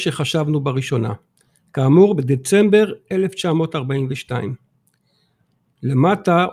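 Nothing technical goes wrong anywhere in this bit of speech, so there's no fault to walk through here.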